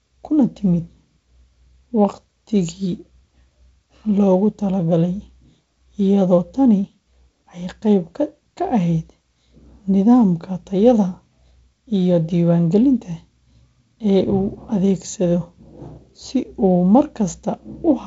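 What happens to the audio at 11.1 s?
Nothing goes wrong at 11.1 s; the speech there carries straight on through the G.722 wideband telephone coding, with its usual light upper-band hiss and nothing above about 7.7 kHz.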